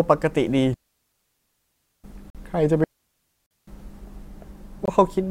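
A speech recording with two long digital wireless dropouts and three short corrupt-frame mutes. The digital wireless dropouts run from 0.74 to 2.04 s, a 1.3 s gap, and from 2.84 to 3.67 s, about 0.84 s. In each, the receiver stopped getting enough usable data from the radio link and muted the output with a very quick fade. The result is a clean stretch of near silence with no burst of noise at either edge, which distinguishes it from analogue RF loss. The corrupt frame muted faults appear as abrupt holes at 2.30 to 2.37 s, 3.46 to 3.51 s (inside the second dropout) and 4.85 to 4.90 s, each roughly 45 to 65 ms long. Here, damaged bits in the compressed stream caused the decoder to reject the affected frames, and the player filled their slots with silence. Each hole's length fits about two codec frames, and because silence stands in for the lost frames, the timing of the surrounding audio stays intact.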